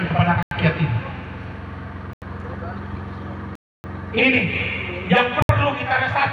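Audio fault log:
0.43–0.51 s, block of digital silence: about 85 ms of samples were replaced with zeros, a length that fits one unfilled 4096-sample buffer. The sound cuts out and back with no fade, leaving a short hole.
2.13–2.22 s, block of digital silence: another 85 ms block, again fitting a 4096-sample buffer, zeroed with hard edges. It is heard as a brief gap.
3.55–3.84 s, block of digital silence: a longer run of zeros lasting 0.29 s, switched in and out abruptly. It is heard as a distinct dropout.
5.42–5.49 s, block of digital silence: 68 ms of zeros with no fade at either edge. It is heard as a short hole.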